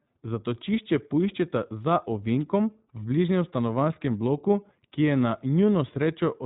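From start to finish the speech sounds boxed-in and slightly rough, with no air or sibilant brightness above 4 kHz and a plainly audible synthetic, buzzy grain. This is the iLBC codec at work: a narrowband VoIP coder that rebuilds the excitation of each short frame on its own rather than predicting from the last one. The plainly audible graininess comes through even with the codec running 20 ms frames in its higher-rate 15.2 kbps mode.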